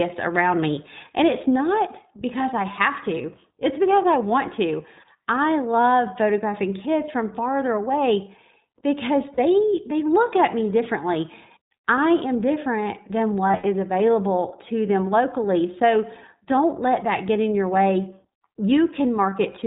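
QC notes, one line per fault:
throughout: iLBC codec. The speech is held to a narrowband channel with nothing above 4 kHz, and the 20 ms frame coding leaves a slightly rough, synthetic edge that is plainly audible. The frame size points to iLBC's 15.2 kbps mode.
3.22 s, 9.34–9.39 s, 13.48–13.65 s, 19.30 s: lost iLBC frames. Each gap is filled by repeating the last pitch cycle with added noise, giving a brief held, buzzy vowel. The longest is a scattered loss over about 160 ms near 13.5 s, with one run of roughly 70 ms. The speech recovers almost immediately because each frame decodes independently.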